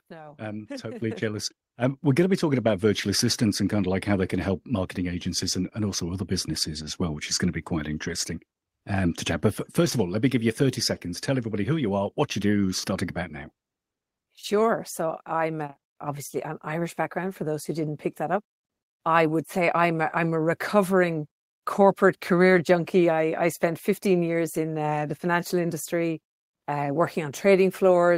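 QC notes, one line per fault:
1.02 s, microphone volume stepped up: the level of the whole signal jumps by about 7 dB in a single step and stays there. The jump is consistent with the call software judging the input too quiet and raising the microphone's input volume at the device. Unlike a talker simply getting louder, the background noise floor rises by the same amount at the same instant, and unlike a smooth automatic gain ramp, the change is abrupt.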